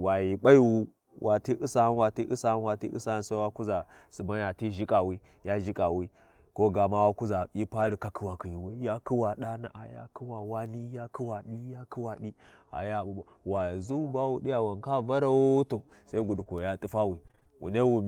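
At 7.79 to 7.93 s, between "kuʒa hyi" and "katawakhiwi ya kuwa", the speech turns briefly rough and noisy without any gap. This is a lost packet rebuilt from error correction: about 80 ms, likely a few packets, was replaced by the lower-bitrate backup copies carried in following packets.

From 10.77 to 17.48 s, scattered short gaps bring roughly seven brief ticks and hiccups, the longest around 30 ms, concealing about 2% of that stretch. Late or missing packets left small holes, each patched by extending the preceding sound.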